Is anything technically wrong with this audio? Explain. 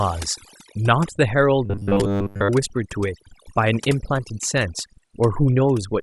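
Yes, two faults. Overdone noise removal runs through the whole speech clip. The noise reduction was set too strong, so frequency bands near its noise estimate are pushed far down along with quiet speech detail. The background drops and breaks up into twinkling specks. A spectrogram shows a dark floor dotted with isolated bright flecks.

From 1.66 to 2.50 s there is robotic sound from repeated short buffers. A rigid, metallic buzz at 100 Hz is heard, likely because a 10 ms chunk is replayed over most of that stretch while real audio is skipped. The waveform shows identical repeating cycles, and the spectrogram shows evenly spaced harmonic lines.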